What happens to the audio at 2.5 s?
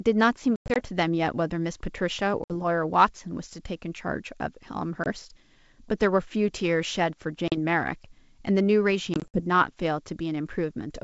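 A hard-edged hole opens in the speech from about 2.44 to 2.54 s, with roughly 60 ms of audio missing, about three packets' worth. When the speech resumes it comes back slightly distorted before it settles. This is packet loss on an ADPCM call: silence filled the gap, and the receiving decoder's adaptive predictor and step size lost track of the sender's, so the first tens of milliseconds after the gap decode incorrectly.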